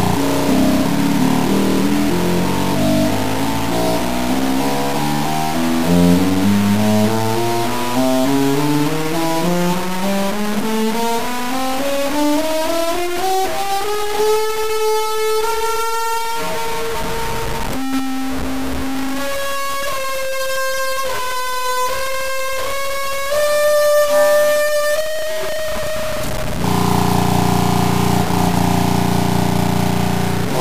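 Throughout, grainy distortion tracks the sound, likely low bit depth without dither, fitting about 4-bit truncation; the waveform shows coarse steps, the spectrogram broadband grit roughly 10 dB down.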